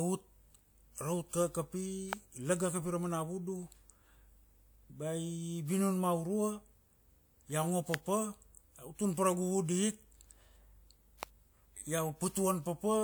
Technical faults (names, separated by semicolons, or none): electrical switching spike